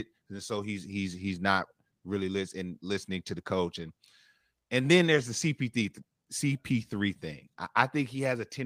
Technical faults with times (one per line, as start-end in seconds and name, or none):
none